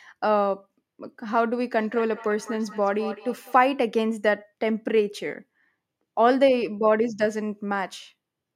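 Speech with a feedback echo between two devices from 1.76 to 3.7 s: delayed copies repeat about every fifth of a second, at their loudest about 16 dB down, showing as stacked, evenly spaced ghost bands in the spectrogram.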